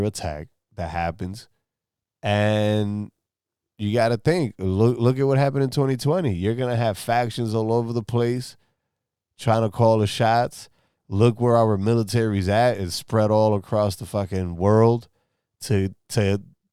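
No technical faults can be heard anywhere in the recording.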